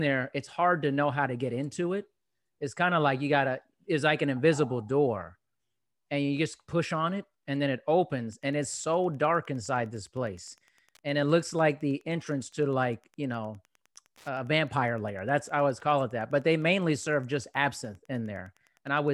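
From 8.28 s, just after "it and then it", Wi-Fi interference sets in: a faint tick every 102.4 ms, about ten a second, as nearby radio beacons get rectified, running to the end.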